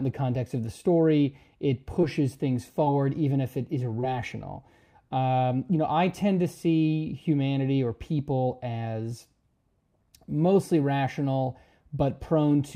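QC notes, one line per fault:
2.01–2.05 s, 2.85–2.88 s and 4.00–4.05 s: short concealed packet loss. Each time, about 20 ms of audio failed to reach the decoder in time. The receiver covered the gap by extending the preceding sound, synthesising 13 ms, 13 ms and 24 ms of fill, then cross-fading back into the real signal. The invented segment only imitates what came before, so each spot is heard as a brief smear or wobble.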